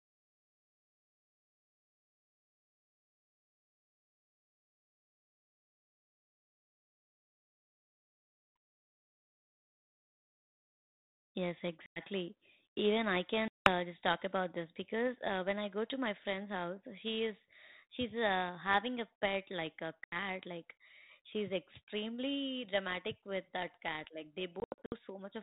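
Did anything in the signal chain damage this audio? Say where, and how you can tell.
Yes. There was packet loss on an ADPCM call, at the network stage. Speech cuts to hard-edged silence at 11.86 s (100 ms), 13.48 s (180 ms, before "just talk about this"), 20.04 s (80 ms, after "a pet like a") and 24.6 to 24.94 s (220 ms lost in short scattered runs). With packets missing, the decoder's adaptive predictor and step size drift from the sender's, so speech resumes slightly and briefly distorted.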